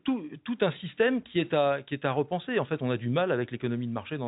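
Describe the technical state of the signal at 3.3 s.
At 3.3 s the signal is intact, with the speech carried cleanly through its G.711 telephone coding, which leaves nothing above about 3.8 kHz.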